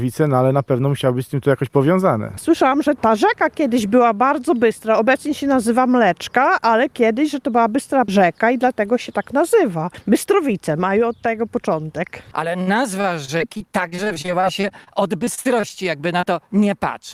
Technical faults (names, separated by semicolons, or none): repeated packet loss (robotic sound)